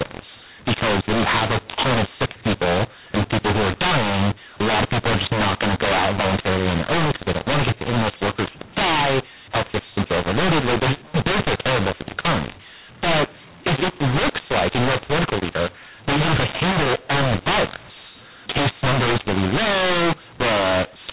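Speech coded as G.711 A-law has been decoded as mu-law for the whole clip, a case of mu-law and A-law mixed up. The two logarithmic laws map the 8-bit codes to different levels, so loudness is scrambled, with some parts too loud and others too quiet. The quietest samples are pushed well above silence, so pauses fill with noise and the speech sounds harsh and distorted. The telephone coding itself is intact: the audio stops at 4 kHz, which fits 8 kHz sampling.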